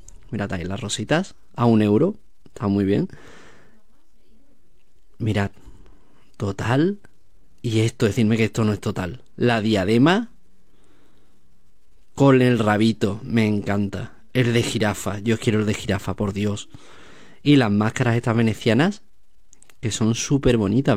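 No technical faults can be heard anywhere in the audio, so there are none to describe in time order.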